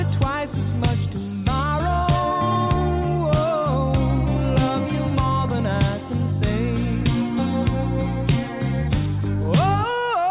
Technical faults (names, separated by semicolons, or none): none